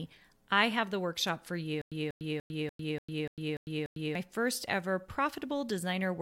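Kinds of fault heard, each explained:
Stutter with silent gaps: From 1.82 to 4.15 s, just after "have the workshop for", the speech locks onto one short fragment of about 191 ms. It plays that fragment eight times. Each repeat is followed by about 101 ms of dead digital silence. The cycle returns evenly every 292 ms. Then the speech picks up at "first ever". The likely cause is a player or stream stalling and replaying its last fragment at each retry. The audio that belonged in those seconds is lost.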